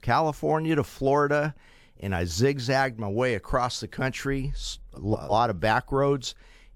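At 4.95 s, just after "way across the country", frames arrive out of order: two neighbouring blocks of about 170.7 ms are swapped until 5.32 s. The result is a garbled flutter. Unlike a dropout, no time is lost.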